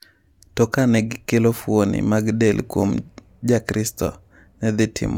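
No technical faults are present in this speech, so there is nothing to describe in time order.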